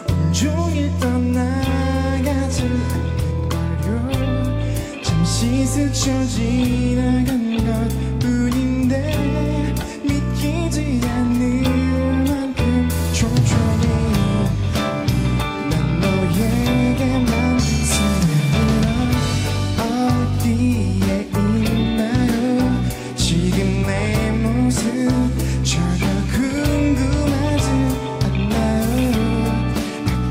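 No technical faults can be heard anywhere in this audio.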